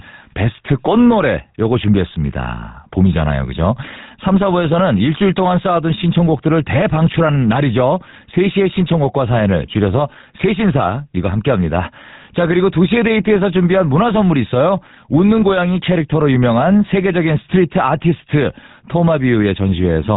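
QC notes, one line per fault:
Throughout, GSM full-rate codec: the speech has been through the old GSM full-rate phone codec, and the damage is plainly audible. It rebuilds the voice from a vocal-tract model fed with a sparse pulse train, keeping just one in three excitation samples, which gives that buzzy, gravelly grain. Nothing gets through above 3.8 kHz, so the top end is gone. The overall character fits the 13 kbps full-rate mode.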